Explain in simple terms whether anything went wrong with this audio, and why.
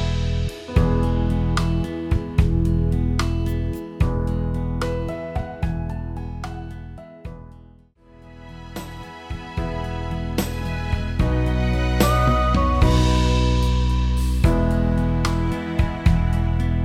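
Nothing went wrong with this audio, because no fault can be heard anywhere in it.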